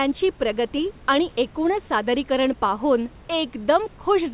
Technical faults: none

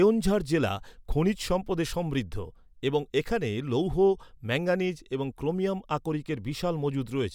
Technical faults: none

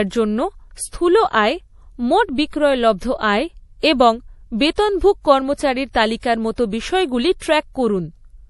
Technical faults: MP3 compression

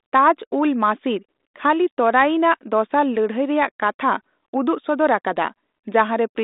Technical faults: none

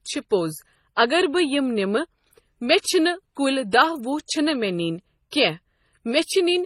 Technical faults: transcoding between lossy codecs

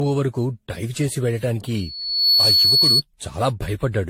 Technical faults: generation loss; loudspeaker feedback squeal

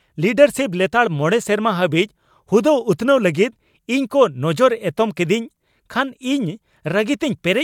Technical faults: none

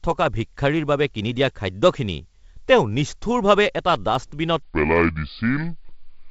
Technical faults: bit errors on an ADPCM link; section at the wrong speed

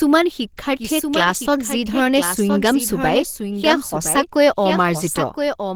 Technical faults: doubled audio track; Opus compression

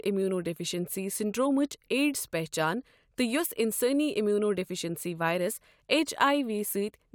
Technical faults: none

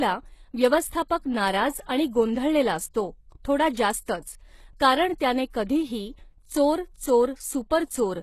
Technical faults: HE-AAC compression

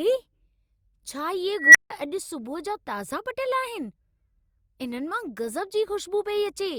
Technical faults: unstable filter

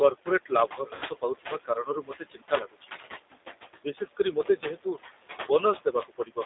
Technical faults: noise suppressor artifacts; G.729 codec; VoIP packet loss concealed by the speech codec

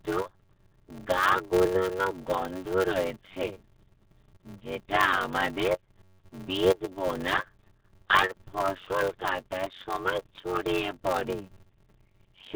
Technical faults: RealAudio 14.4 codec; block size mismatch (padded)

